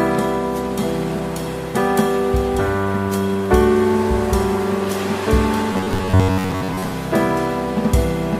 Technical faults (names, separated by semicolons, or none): robotic sound from repeated short buffers